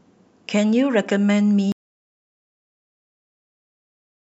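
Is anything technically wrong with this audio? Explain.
Yes. At 1.72 s the speech cuts out mid-flow in an audio dropout to silence that lasts to the end. The gap is silence with no room tone. The input was likely lost, through a disconnect or mute, while recording continued writing silence.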